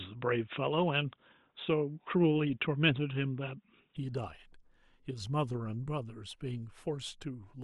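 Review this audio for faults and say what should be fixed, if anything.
From the start to 3.97 s the speech sounds dull and boxy, with nothing above 3.8 kHz, then opens up abruptly with no gap, along with a level shift of around 5 dB and a change in the faint background noise, which sits roughly 55 dB below the speech. The likely cause is an input switched to a poorer device for the opening, such as another microphone or a headset's call profile, whose narrower band and different noise and gain give way when the full-range input takes over. To prevent it, lock the recording input to one device and disable automatic switching to headset call profiles before recording.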